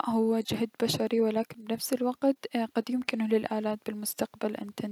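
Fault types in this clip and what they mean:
No audible faults appear anywhere in this speech recording.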